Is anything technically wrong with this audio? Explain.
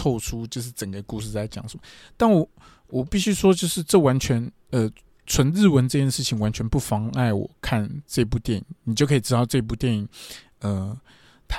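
No, nothing in this speech recording stood out as a technical problem on listening.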